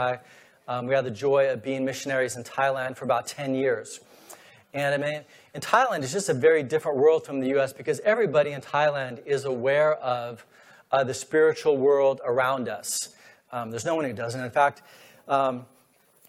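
No dropouts, clicks, distortion or timing errors turn up anywhere in the clip.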